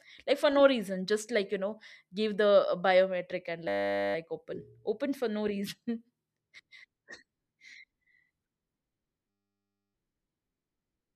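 A speech clip with two spells of steady, pitched buzz where the sound freezes. The first runs from 3.68 to 4.15 s, right after "biometric and" and before "open open for no"; the second from 9.30 to 9.94 s. Both are a system hang loop: the driver stalled while the hardware kept replaying the same 10 ms stretch of its ring buffer, so a sliver of audio repeats at 100 Hz and turns into a buzz.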